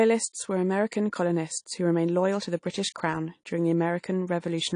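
From start to finish the speech sounds dull and smeared, with nothing above about 10.1 kHz and a warbling, fizzy edge on sibilants and held vowels. This plainly audible damage is likely AAC compression, with the AAC-LC coder quantising each frame's spectrum too coarsely and dropping or noise-filling bands, which fits a bitrate around 32 kbps. A simple low-pass filter would only dull the top. This coder leaves shifting texture inside the remaining band.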